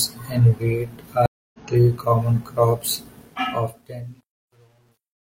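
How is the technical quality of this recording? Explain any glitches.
The recording has two clear glitches: a dropout in the first half and a gritty fade at the end.

From 1.26 to 1.59 s, just after "and wheat", the sound cuts to silence for about 0.28 s, then comes back at "three common crops" with a soft onset. The clip skips ahead by roughly a third of a second rather than picking up where it stopped. This is a stream reconnect. The connection dropped, the player went quiet, then rejoined the live stream with a fresh decoder. Because the stream had moved on in the meantime, some material was lost, and the new decoder eased its first frames in.

The second fault is truncation distortion on a fade. From 3.22 s to the end, the fade turns grainy. From 3.86 s onward it is worst. The volume stage was keeping too few bits, which points to roughly 10-bit resolution, with no dither. As the level shrank toward the smallest step, the waveform collapsed into a few coarse square steps.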